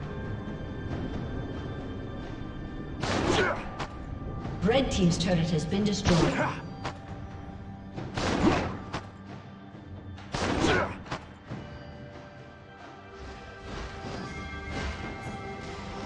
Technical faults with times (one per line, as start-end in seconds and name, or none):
none